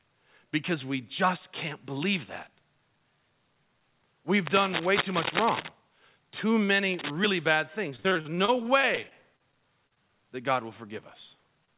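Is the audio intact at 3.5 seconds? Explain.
Yes, at 3.5 seconds the speech is intact, carried through the call path with its G.711 A-law telephone coding, which leaves nothing above 4 kHz.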